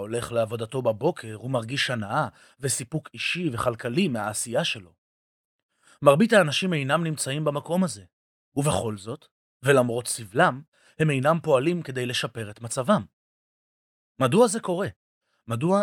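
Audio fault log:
No faults were found in this speech recording.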